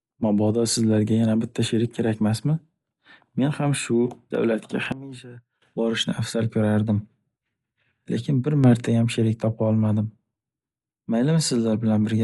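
From start to finish the speech sounds dull and a bit rough, with nothing above about 11.5 kHz and a fluttery, grainy noise hanging around the voiced sounds. That's plainly audible codec damage, most likely Dolby Digital compression at a low rate, something like 64 kbps. When an AC-3 style encoder runs short of bits, it cuts the top of the band and leaves many frequency lines with no real detail. The decoder then fills those gaps with noise, and that noise is the roughness you hear around tones.

At 4.92 s the level suddenly drops by about 18 dB and stays down until 5.62 s, then snaps back up. The voice and the background noise fall and rise together, with no fade either way, which points to a sudden gain jump. The likely cause is a gain setting being applied from one sample to the next with no ramp. At 8.64 s it happens again, this time upward by about 6 dB, and it lasts until 8.87 s before dropping back just as abruptly.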